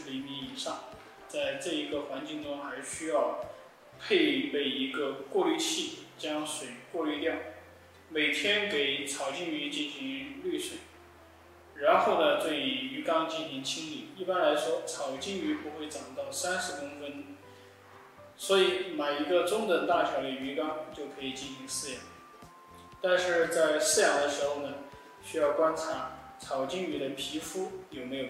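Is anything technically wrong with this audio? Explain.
No, nothing technically wrong can be heard here.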